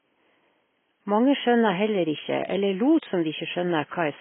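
Throughout the speech the sound is dull, with nothing above 3.8 kHz, and smeared by heavy codec damage, which fits AAC compression at a bitrate of around 16 kbps. Unlike a clean low-pass filter, it also blurs detail below the cut-off. The room noise stays about 53 dB below the speech.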